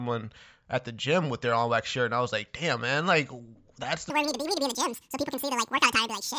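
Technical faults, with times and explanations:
4.1 to 6.38 s: wrong sample rate. Right after "damn man like that's", the speech suddenly runs twice as fast and jumps a full octave, 12 semitones up. Speed and pitch rising together by exactly 2 fits 16 kHz audio played at 32 kHz without conversion.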